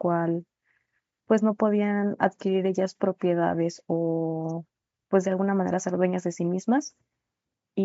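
No technical faults can be heard in this speech. It has passed through a call's microphone processing, which removes the lowest bass and leaves nothing above 8 kHz, as such a path normally does.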